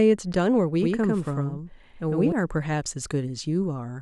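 From 0.82 s to 2.32 s the speech is heard twice. A second full-band copy trails the original by about a tenth of a second, at roughly the same loudness. This is a doubled audio track. The copy has no decay or room colour, so it sounds like a hard slapback, not an echo. It cuts in and out abruptly at both ends. The likely cause is a second, slower capture path mixed in with the first.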